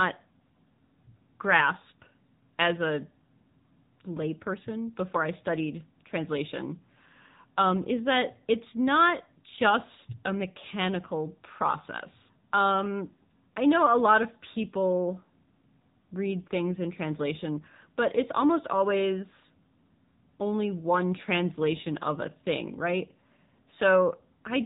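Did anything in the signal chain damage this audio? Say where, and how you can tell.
Yes: the codec stage, AMR narrowband mobile codec, throughout. Nothing passes above 3.8 kHz, and the speech sounds buzzy and synthetic, unlike a plain low-pass. That fits a low mode near 8 kbps.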